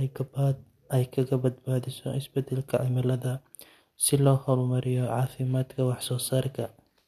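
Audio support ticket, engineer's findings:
No audible faults found in the speech; nothing to attribute to any component.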